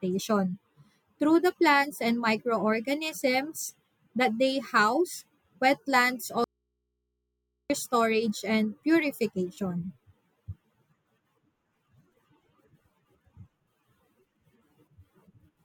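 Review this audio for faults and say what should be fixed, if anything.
Audio dropout to a faint residue, from 6.44 to 7.70 s: right after "that they house wetlands" the speech cuts off abruptly for about 1.26 s, leaving only a low mains hum roughly 55 dB below the speech. The break is most likely a brief loss of the source feeding a recording path that stayed live. The hum is the open input with nothing driving it, so the sound is missing rather than paused or faded. The missing stretch needs re-recording or patching from a backup take. To prevent a recurrence, secure and check the source connection and keep a redundant backup recording running.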